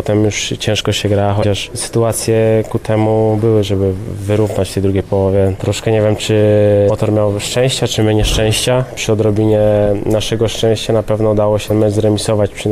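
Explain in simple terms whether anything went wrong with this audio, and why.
Three short chirps or blips interrupt the sound, at 1.40 to 1.44 s, 6.86 to 6.90 s, and 11.67 to 11.71 s. They come from damaged data in a compressed stream: some bytes were corrupted, so the decoder misread those pieces and had to find its place again.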